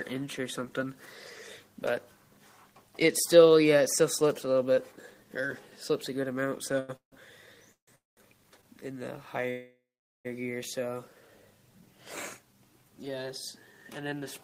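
From 6.79 to 8.65 s the audio shows repeated stalls (stutter): four short holds, the longest 154 ms, together filling 416 ms and about a fifth of that span. Packets kept arriving late, so the jitter buffer repeatedly ran dry and the receiver stretched the last sound. Nothing is lost, but the passage drags.

Two call audio freezes occur, the first within that span. From 7.95 to 8.19 s the sound holds and fades for 214 ms, mostly silent. From 9.50 to 10.27 s a longer 746 ms hold decays to 430 ms of silence. The likely cause is packets held up in transit emptying the buffer. Playback then resumes where it stopped, with nothing missing.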